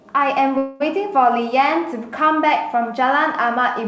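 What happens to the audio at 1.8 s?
Nothing goes wrong at 1.8 s: the speech carries on intact through the call path, with the usual band limit of that codec leaving nothing above 8 kHz.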